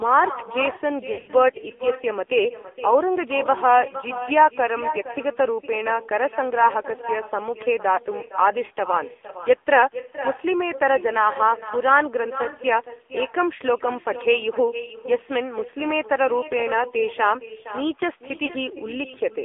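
Throughout, the far end is playing the call over a loudspeaker and its microphone picks that sound up again, with no echo canceller to remove it. The result is echo with no canceller: everything said returns roughly half a second later as a copy about 13 dB quieter and thinner, trailing behind the speech for the whole clip.

The whole clip is also carried by the AMR narrowband mobile codec. The line band runs only from 300 Hz to 3.5 kHz, so nothing above that top edge survives. The codec rebuilds speech from a vocal-tract model excited by a few pulses per subframe, and at a low bitrate, which fits the 7.4 kbps mode, that model leaves the speech plainly buzzy and synthetic.

Lost AMR speech frames cause three dropouts. When a frame is lost, the decoder repeats its last good pitch and vocal-tract settings at falling gain. From 1.12 to 1.31 s, about 120 ms of frames are lost, scattered over 160 ms, with the longest unbroken gap 60 ms. 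The speech there warbles, smears and sags in level before recovering rough. Single-frame losses near 7.96 s and 18.46 s each produce a brief dip or warble of about 20 ms.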